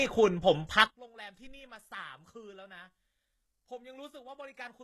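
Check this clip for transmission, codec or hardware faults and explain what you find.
Two faults are present: codec damage throughout, and a polarity problem from 0.87 s onward.

HE-AAC compression, likely at around 16 kbps, runs through the whole clip. The treble is rebuilt from copied lower bands, so s sounds turn gritty and metallic rather than simply dull as they would with a plain low-pass.

One channel inverted is the likely cause of the collapse from 0.87 s to the end. The mono sum drops about 25 dB, leaving a faint residue rather than the full silence of a dropout.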